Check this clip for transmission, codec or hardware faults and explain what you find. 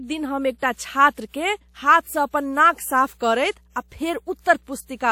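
One hardware fault runs through the whole speech clip: mains hum.

Mains hum is present from start to finish. A ground loop or a nearby transformer has let the 60 Hz power line leak into the signal path, adding a steady low tone around 35 dB below the speech. On a spectrogram it shows as a thin, unbroken horizontal line at 60 Hz across the entire clip. In the waveform, the gaps between phrases carry a small, regular ripple instead of flat silence.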